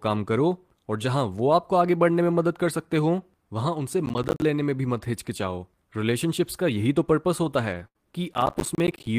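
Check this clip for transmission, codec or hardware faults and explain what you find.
Three kinds of fault are present in this speech clip: two episodes of processor overload crackle, one lost packet rebuilt from error correction, and one burst of packet loss.

Processor overload crackle occurs from 4.06 to 4.42 s and again from 8.34 to 9.07 s. The spacing of the defects points to audio buffers of roughly 10 ms that the processor repeatedly failed to fill in time. Each missed buffer became a short silent gap with abrupt edges. The first episode has a dozen or more such gaps and the second a few dozen, so both are heard as gritty, tearing crackle over the sound that stops once the load eases. A network burst is different: it produces one continuous concealed stretch, not many tiny hard-edged holes.

The lost packet rebuilt from error correction sits at 7.43 to 7.45 s and spans 20 ms. One packet went missing, and the decoder replaced it with the lower-quality backup copy carried in the following packet, which is Opus in-band forward error correction. 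Nothing drops out. Instead there is a brief patch that sounds rougher and noisier than its surroundings. This continuity is what separates it from the burst loss shortly after, which has no such backup and leaves audio missing.

The burst of packet loss runs from 7.87 to 7.98 s. For about 72 ms the receiver had no data, so it stretched the last decoded sound forward and faded it out. When packets resumed, playback picked up about 80 ms further on, so that portion of the sound is simply gone. The stretching also adds about 9 ms to the timeline. The result is a held, decaying tail followed by a jump, not the rough but complete audio of the error-corrected packet.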